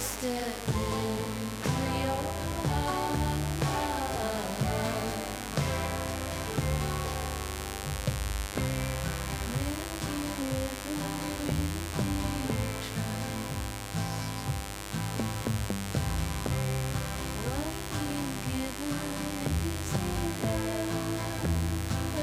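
From the start of the clip to its end, a mains buzz sits under the sound at a level only around 10 dB below it, so it is prominent throughout. Sharp switching spikes from a dimmer, rectifier or unshielded path repeat twice per 50 Hz cycle, producing a dense series of 50 Hz harmonics reaching into the kHz range. The result is a steady, raspy, edged buzz rather than a smooth low hum.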